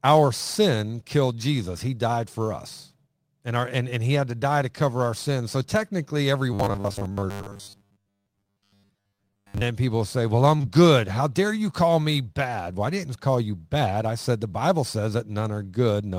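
From 6.54 to 9.62 s, just after "technically every" and ending before "then people say", the speech turns into robotic sound from repeated short buffers, a rigid metallic buzz at 100 Hz that loosely tracks the syllables. The likely cause is audio arriving too rarely, so a 10 ms slice gets looped to fill the time while most of the real audio in this stretch is skipped. On a spectrogram, evenly spaced harmonics at multiples of 100 Hz replace the natural pitch contour, and the waveform shows identical repeating cycles.

At 10.57 to 10.61 s and again at 10.61 to 10.65 s come two back-to-back cases of short concealed packet loss. Each gap was bridged by extending the preceding sound and then crossfading into the real signal, and together they are heard as a brief smear or wobble of about 80 ms. A spectrogram shows a short band of frozen or blurred harmonics with softened onsets, and the waveform looks unnaturally smooth and self-similar across the join.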